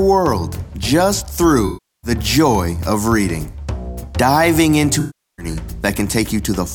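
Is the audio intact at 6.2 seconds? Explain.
Yes, the audio is intact at 6.2 seconds, with no dropout, click, distortion or other fault at that point.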